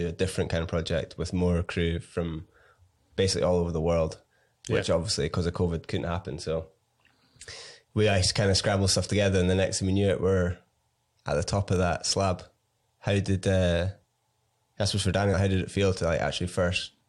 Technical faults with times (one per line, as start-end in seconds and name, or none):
4.25 damaged data in a compressed stream
15.33 damaged data in a compressed stream